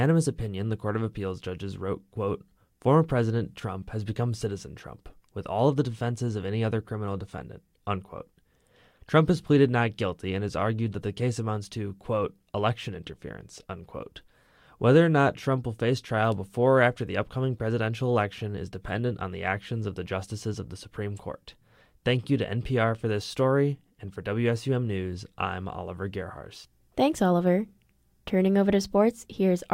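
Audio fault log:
Nothing to log here: no faults turn up anywhere in this speech recording.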